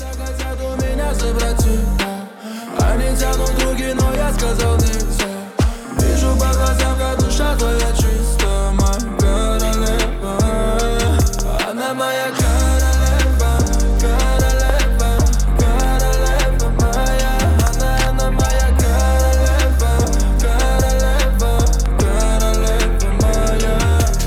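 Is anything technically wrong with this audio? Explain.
Yes. Loud pops occur at 4.15–4.40 s, 11.22–11.41 s, 14.70–14.72 s, 15.80–15.86 s, 17.67–17.69 s and 21.86–22.02 s. Most are double pops; the two near 14.7 s and 17.7 s are single. They peak about 10 dB above the sound, about 5 dB at 11.2 s. Each is likely a voltage step or pulse from a switch, plug, static or driver glitch, briefly shaped by later circuitry, and heard as a sharp thump over sound that continues underneath.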